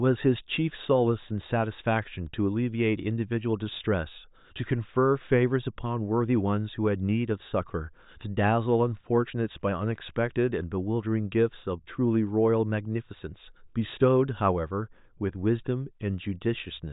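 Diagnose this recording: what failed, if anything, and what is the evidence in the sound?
Nothing failed; no fault is audible in the recording.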